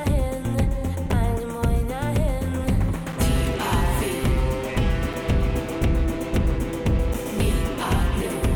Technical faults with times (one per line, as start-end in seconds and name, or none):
1.12 gap between chunks
3.12 gap between chunks
5.13 gap between chunks
7.14 gap between chunks